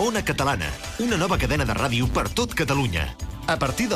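Throughout, there's a filter restarted on every block: it drops its state each 10 ms, so every block starts with a little tick, adding up to a 100 Hz buzz that rises and falls with level.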